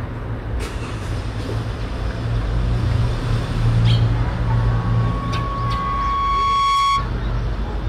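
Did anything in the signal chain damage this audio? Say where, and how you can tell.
Yes. A loudspeaker feedback squeal enters in the analogue acoustic path, where a microphone hears the speaker it drives. From 4.43 s a single tone at about 1.1 kHz swells steadily over roughly two seconds, settles around 5 dB above the sound, and stops at 7.11 s. It can't be mains hum or a steady interference tone, because it grows by itself at the one frequency where the loop gain passed one.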